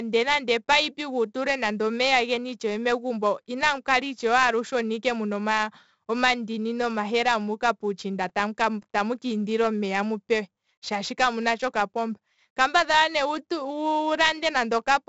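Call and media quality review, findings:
4-bit ADPCM compression, whole clip, 0 to 15 s. Gritty hiss riding every loud speech passage, tracking level. Sharp attacks distorted where step size lags. Nothing above 7.8 kHz, which points to a 16 kHz sample rate and fits 64 kbps. Heavy codec damage. Probable component: legacy encoder in the capture or storage chain.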